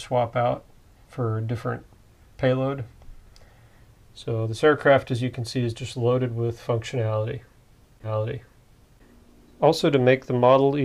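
At 8.03 s there's a stream segment repeated: the player queued the same chunk twice, so the second of audio running up to 9.03 s plays through, then jumps back and plays again. You'll hear a small blip right at the join, followed by a full second of material you've just heard, which stretches the clip by that same second. It sounds like a hiccup in delivery rather than anything in the recording itself.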